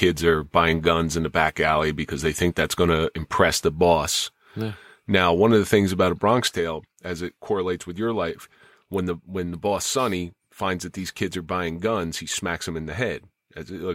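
A speech recording whose level falls abruptly at 6.48 s and stays down to the end, by about 6 dB, as if a fader had been snapped halfway down. This is a case of one channel dropping out: one side of the stereo signal has likely been lost, so once the two channels are summed to mono, the material they shared arrives at half strength, and anything carried only by the missing side vanishes entirely.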